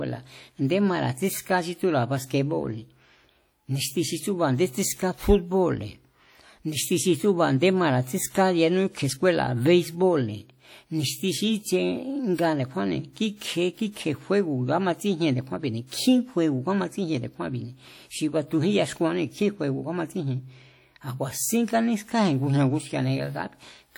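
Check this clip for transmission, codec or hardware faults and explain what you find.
One fault runs through the whole speech clip. WMA compression, throughout: the speech rings and washes, with hiss breathing alongside it. This is likely long-block transform coding spreading quantisation noise, fitting roughly 48 kbps.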